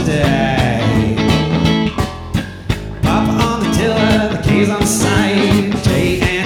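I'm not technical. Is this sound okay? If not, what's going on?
Yes, it's fine: nothing in it jumps out as a glitch, dropout or distortion, so there's nothing here you need to worry about.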